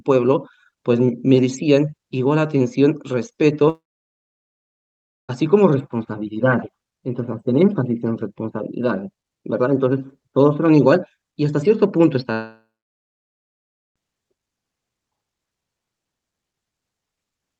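At 3.69 s the sound dies into a fading buzz, then near-silence for about 1.5 s until 5.31 s; at 12.33 s the same happens, about 1.3 s of silence, resuming at 13.98 s. Each is likely a long network dropout: roughly 1.6 s of audio never arrived, so the receiver stretched the last sound before giving up, and playback resumes without the lost part.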